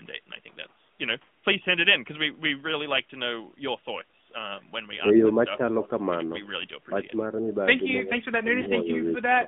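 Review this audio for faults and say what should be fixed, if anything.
AMR narrowband mobile codec, throughout the clip: the speech is confined to a line band of 150 Hz to 3.5 kHz, and the low-rate vocal-tract model leaves it plainly buzzy and synthetic. The coder rebuilds each 20 ms frame from a few pulses driving a filter. The degree of coarseness fits a bitrate around 10.2 kbps. Carrying the call over a wideband codec such as AMR-WB, or at a higher narrowband rate, would prevent this.

Lost AMR speech frames at 4.12 s and 8.62 to 8.69 s: the first is a single brief warble lasting 20 ms. The second runs for 40 ms, which points to two consecutive frames, and the sound smears and sags before recovering roughly. In both cases the decoder, missing data, repeated its last good pitch and filter settings at falling gain. Better radio coverage or stronger channel protection on the link would prevent these gaps.

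Echo leak at 5.83 to 5.88 s: a faint copy of the speech arrives 293 ms late, about 20 dB below the direct sound. Its likely source is a loudspeaker at the far end whose echo canceller let part of the microphone pickup through and sent it back down the line. A better-converged echo canceller, a headset, or lower speaker volume at that end would prevent this leak.

Speech suppressed in double talk at 6.87 to 7.06 s, 7.26 to 7.5 s, 8.03 to 8.19 s, and from 8.42 s to the end: the speech dips repeatedly. The deepest drop is about 15 dB in the first stretch, about 5 dB in the second, and about 10 dB in the last two. These dips likely come from an echo canceller that could not separate the talker from loudspeaker echo while both sides spoke, so it attenuated everything. Double-talk detection tuned to keep near-end speech would prevent these dropouts.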